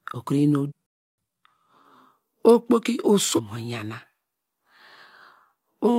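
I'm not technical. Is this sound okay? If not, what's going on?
No. It has three kinds of problem.

Damaged data in a compressed stream: at 0.65 to 0.72 s, 3.33 to 3.40 s and 5.84 to 5.89 s the speech is broken by a brief glitch. Part of the stored file is corrupted, so the player misreads it and jumps to the next readable piece.

Playback stall: from 0.86 to 1.18 s, about a third of a second, the speech stops dead with no noise and then carries on. The player most likely ran short of incoming data and had nothing to play until more arrived.

Time-compressed catch-up: straight after that gap, from 1.18 to 1.48 s, the speech runs at double speed to make up the lost time. The pitch stays normal, so it sounds hurried rather than squeaky like a sped-up tape.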